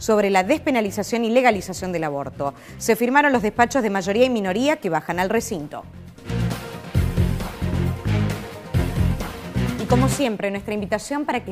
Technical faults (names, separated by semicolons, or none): none